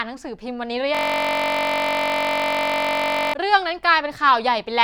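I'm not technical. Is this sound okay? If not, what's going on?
No. From 0.95 to 3.34 s there is a system hang loop: the computer stalled while the sound hardware kept replaying the same 21 ms scrap of audio, over a hundred times. Repeating about 47 times a second, it turns the speech into a steady buzz.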